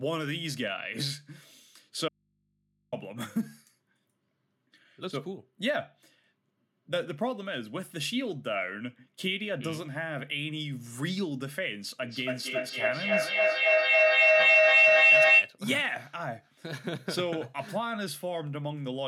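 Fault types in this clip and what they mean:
Audio dropout to a faint residue: the speech cuts out abruptly for about 840 ms from 2.08 s, leaving only a mains hum well below the speech, somewhere around 35 dB down. The sudden drop points to a lost signal feeding a still-live input, likely an interrupted connection.
Feedback howl: from 12.03 to 15.59 s a microphone-to-loudspeaker loop keeps gaining level each pass, so instead of dying away it narrows into a whistle near 3 kHz, with a loop delay of roughly 300 ms, peaking about 12 dB above the speech.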